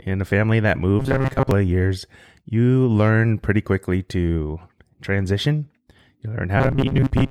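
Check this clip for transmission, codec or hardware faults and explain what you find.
Two stretches of robotic sound from repeated short buffers are present, from 1.00 to 1.51 s and from 6.58 s to the end of the clip at 7.30 s. In both, the speech turns into a rigid, metallic buzz near 134 Hz that only loosely tracks the syllables. The first stretch is mostly repeated material, and the second is about half. The likely cause is audio arriving too late, so the playback software loops the last fragment of roughly 7.5 ms (one over 134 Hz) while real audio is skipped, imposing that fixed pitch.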